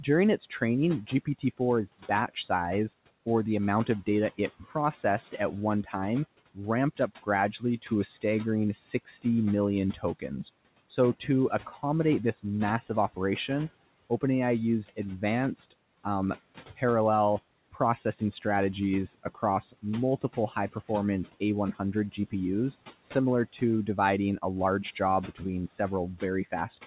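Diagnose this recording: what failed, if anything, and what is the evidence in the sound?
It's the call processing stage: speech cut by the noise suppressor from 0.03 to 2.5 s, 3.86 to 16.82 s (after "or the"), and 17.73 s onward. It treats soft consonants and word endings as room noise and pulls them down by about 15 to 17 dB, so they sound swallowed.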